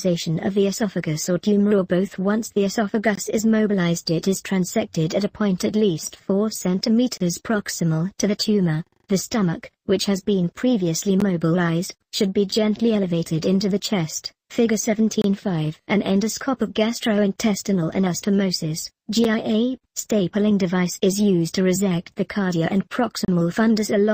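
The audio has a gap between stream segments roughly every 4 seconds: at 3.15–3.18, 7.18–7.21, 11.20, 15.22–15.24, 19.24 and 23.25–23.28 s. Each is a hard-edged silence of 7 to 32 ms. The 4-second spacing fits segment timestamps leaving holes that the player fills with silence.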